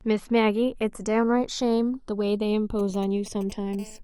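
Throughout the speech, channels drifting apart: the two channels run on clocks differing by around 100 ppm, so their delay slides to under half a millisecond, giving slow flanging when summed to mono. From 2.79 to 3.75 s, GSM signalling bursts from a nearby 2G phone are rectified into galloping clusters of ticks and brief 217 Hz buzzes, roughly 15 dB below the speech. From 3.79 to 3.99 s, GSM phone buzz sets in as the phone enters a call: a steady, raspy 217 Hz buzz rich in harmonics, about 20 dB below the speech.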